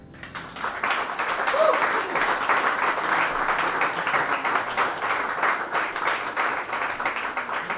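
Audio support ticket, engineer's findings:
Nothing to flag here: the sound comes through the call path as expected, G.711 A-law at 64 kbps, with the band stopping at 4 kHz as that codec does.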